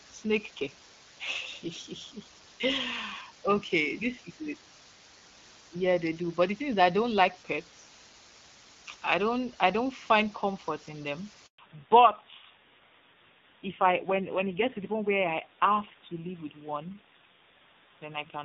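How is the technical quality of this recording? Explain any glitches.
The technical quality is poor. Three faults stand out.

A low bit depth with dither hiss runs throughout. It sounds like about 7-bit resolution. Dithered rounding turns the error into steady hiss, roughly 20 dB below the signal.

A handover gap runs from 11.46 to 11.58 s. The call switched networks, no frames arrived for 120 ms, and the speech fades into silence.

A fallback to narrowband begins at 11.58 s and lasts to the end. The clear HD Voice sound before the gap gives way to dull, rougher speech with nothing above 4 kHz. That fits a low-rate narrowband mode near 5.9 kbit/s.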